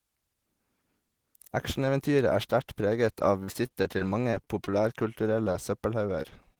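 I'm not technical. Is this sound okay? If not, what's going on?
No. From 3.43 to 4.74 s there is repeated packet loss (robotic sound). Ten bits of the call arrived late or never, each patched with an imitation, so the speech turns choppy and robotic.

Later there are four cases of short concealed packet loss, at 5.44–5.48, 5.52–5.56, 6.22–6.26 and 6.54–6.58 s. Each time about two hundredths of a second went missing and was filled in, leaving a brief smear or wobble.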